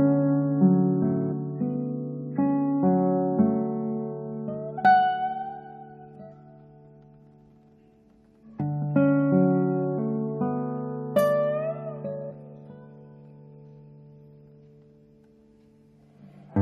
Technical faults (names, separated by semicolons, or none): damaged data in a compressed stream